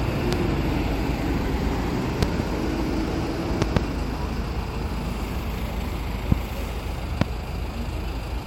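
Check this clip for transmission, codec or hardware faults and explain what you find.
There are loud pops in this clip, five events in all. A sudden voltage step or pulse, likely from a plug, switch, static discharge or driver glitch, enters the signal path. The following circuitry shapes each pulse into a sharp transient, heard as a pop jumping well above the sound, roughly 20 to 25 dB louder, while the sound continues underneath. Single pops fall at 0.33 to 0.35 s, 6.32 to 6.34 s and 7.21 to 7.24 s. Paired pops in quick succession occur at 2.23 to 2.42 s and 3.62 to 3.79 s.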